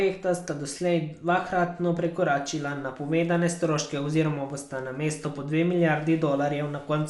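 Speech, with Dolby Digital compression damage plainly audible for the whole clip: the sound is dull, with a rough, fluttering noise around voiced tones. This is likely low-rate AC-3 coding, consistent with roughly 64 kbps, where the encoder cuts the band and leaves many frequency lines without mantissa bits for the decoder to fill with dither noise. A spectrogram would show a flat ceiling with nothing above 11.5 kHz, and grainy, speckled noise between harmonics.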